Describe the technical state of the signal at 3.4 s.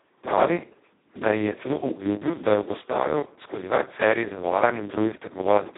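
At 3.4 s the speech sounds hoarse, buzzy and close to robotic, with nothing above about 3.8 kHz. This is Speex codec damage, present throughout, and its starved CELP excitation points to a very low bitrate of roughly 2 kbps on a 150 Hz to 3.7 kHz line.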